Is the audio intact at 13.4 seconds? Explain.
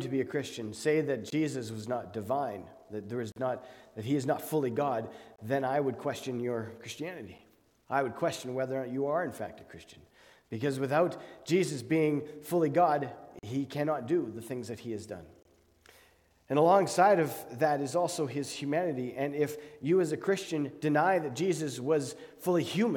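No. From 13.39 to 13.43 s there is a gap between stream segments. The time stamps of two consecutive 2 s segments leave a hole of about 42 ms, and the player fills it with silence. Nothing is lost; the audio is simply pushed later. It sounds like a brief hard-edged dropout. On a waveform it shows as a flat, near-silent stretch with abrupt edges. A spectrogram shows a narrow blank vertical stripe across all frequencies.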